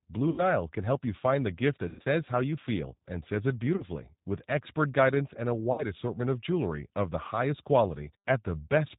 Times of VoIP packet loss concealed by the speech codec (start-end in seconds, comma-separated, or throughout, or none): 0.30-0.43, 1.89-2.05, 3.76-3.85, 5.72-5.86